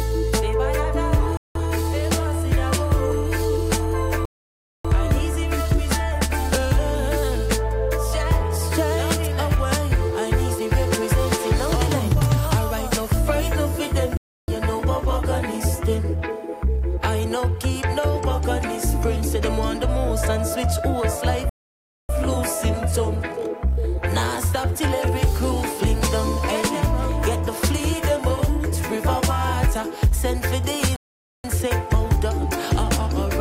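A Bluetooth stall is the likely cause of five dropouts: held-up wireless packets let the headphone buffer run empty, so playback halts until resent data arrives. The sound cuts abruptly to silence and then resumes at 1.37 to 1.55 s (0.18 s), 4.25 to 4.85 s (0.59 s), 14.17 to 14.48 s (0.31 s), 21.49 to 22.09 s (0.60 s) and 30.96 to 31.44 s (0.48 s), each gap a clean hole in the audio.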